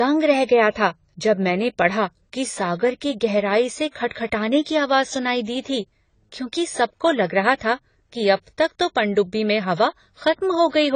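A speech clip with AAC compression damage that runs from start to finish. Nothing is present above about 9.9 kHz, so the top of the sound is cut away and it sounds dull. The damage is plainly audible. Sibilants turn fizzy, and sustained sounds warble and smear. The likely cause is AAC-LC coding at a low bitrate, which fits something near 24 kbps. At that rate the encoder drops the high band and starves the rest of bits.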